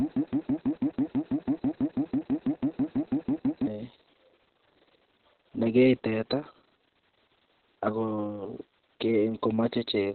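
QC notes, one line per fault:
throughout: Opus voice compression. Nothing above 4.2 kHz, so speech sounds muffled, hoarse and a bit robotic, pointing to narrowband SILK at a very low bitrate, around 6 kbps.
0.00–3.67 s: broken-record loop, already running when the clip opens. A 164 ms fragment repeats back to back about twenty times, likely a stalled stream resending its last chunk, so the real audio there is gone.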